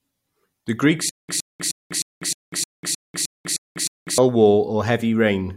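A speech clip with stutter with silent gaps running from about 1.09 s to 4.18 s. A short 112 ms burst of the speech keeps coming back, ten times in all, each followed by roughly 197 ms of dead digital silence, so it pulses at a steady 309 ms period. That pattern likely comes from a stalled player or stream replaying its last fragment on each retry before running dry, and whatever speech belonged in that stretch is simply gone.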